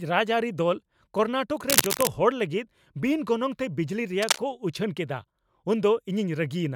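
Cable scratch noise at 1.69–2.09 s and 4.22–4.38 s, before "ᱠᱚ ᱩᱪᱷᱟᱹᱱ": bursts of uneven scratching about as loud as the speech, likely from a worn connector being moved.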